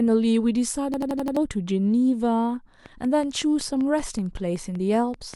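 From 0.94 to 1.37 s the speech is caught in a system hang loop: the playback path stalled while the hardware kept replaying the same ring buffer. One 85 ms slice repeats five times at 11.7 Hz, which fits a 4096-sample buffer, giving a machine-gun stutter and swallowing nearly half a second of speech. The waveform shows identical blocks tiled end to end, and the spectrogram shows the same pattern copied at exact intervals with hard seams between copies.

From 2.86 s to 5.35 s a train of clicks runs under the speech, about fifteen sharp ticks at a steady 5.25 per second, each peaking a little above the speech level and just as audible in the pauses. The likely cause is interference from nearby equipment or a struggling interface. On the waveform they appear as evenly spaced narrow spikes of nearly the same shape. On the spectrogram they form thin vertical lines spanning the full frequency range at regular spacing.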